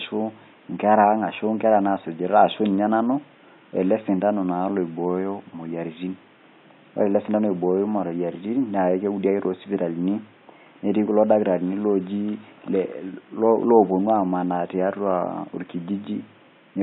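No technical faults are present.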